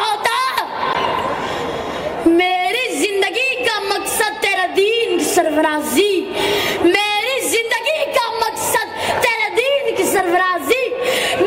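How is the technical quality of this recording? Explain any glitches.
There are two glitches, both the same kind of fault: a block of digital silence. The first hits at 0.93 s and lasts about 15 ms; the second is at 10.19 s and is tiny, about 1.4 ms. In each case a run of samples drops straight to silence and then jumps back with no fade. That usually happens when the output buffer isn't filled in time. The longer one, just under 15 ms, reads as a tick or dip rather than a hole, the short one as a single tick.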